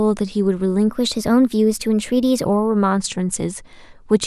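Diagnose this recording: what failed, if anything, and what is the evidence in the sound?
A section at the wrong speed runs from 0.89 s to 2.45 s: the speech there plays 1.12 times too fast, so it is hurried and raised by about two semitones, then drops back to normal. The likely stage is editing or playback, with that stretch resampled against a mismatched clock. On a spectrogram, the harmonic stack jumps upward about 12% at 0.89 s and falls back at 2.45 s, while the waveform's syllable envelopes look visibly compressed in time across the segment.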